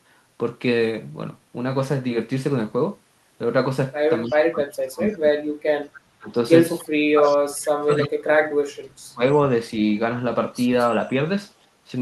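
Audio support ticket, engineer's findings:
Speech suppressed in double talk. Talker level dips and breaks up at 4.25–5.73 s, 6.17–6.30 s, 7.13–8.60 s and 8.90–9.22 s. Deepest drop about 40 dB. Likely the far-end echo canceller ducking both talkers during overlap.

Echo leak. Faint delayed copy of the voice at 4.30–4.36 s, 5.08–5.17 s, 6.79–6.89 s and 7.24–7.32 s. Lag 288 ms, about 20–30 dB below speech. Likely residual loudspeaker echo escaping the canceller on a speakerphone endpoint.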